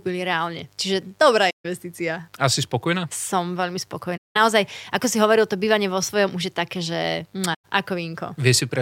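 Right from the start and all the way through, there's a mains buzz under the speech: a steady, raspy 50 Hz buzz sitting roughly 40 dB below the talker. It's rough rather than a clean hum because something like a dimmer, a rectifier or a missing shield is injecting sharp switching spikes twice per mains cycle, and those spikes spread into a dense stack of 50 Hz harmonics reaching well up into the kilohertz range. It's low in level but never lets up.

On top of that there are three short holes from AAC frame loss with muting: 1.50 to 1.65 s (about 150 ms), 4.17 to 4.37 s (about 190 ms), and 7.54 to 7.65 s (about 110 ms). In each, a run of AAC frames went missing and the decoder filled them with silence. The overlapping transform windows fade the sound down and back up, so each gap has soft edges, and the speech just briefly drops out.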